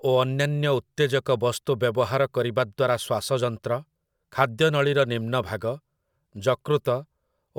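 A speech recording with no technical fault to be heard in it. Nothing goes wrong at any point in the audio.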